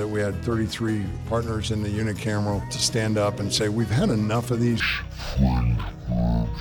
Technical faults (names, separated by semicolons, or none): stereo read as mono